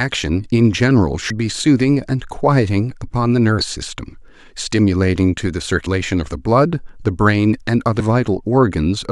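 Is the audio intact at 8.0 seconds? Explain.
No. At 7.99 to 8.01 s there are compressed frames skipped: the decoder never plays some damaged or missing frames, so the speech jumps ahead by about a tenth of a second. Unlike a dropout, no silent gap appears.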